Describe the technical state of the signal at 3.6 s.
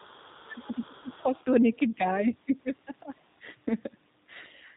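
At 3.6 s the speech carries G.729 codec damage, present throughout the clip rather than at that instant alone. The sound is rebuilt from a vocal tract filter, a pitch estimate and a few pulses per short frame, which fits an 8 kbit/s G.729A stream, so it comes across as rough, slightly synthetic and plainly degraded. A spectrogram shows nothing above 4 kHz, and the harmonics look smeared and grainy rather than clean.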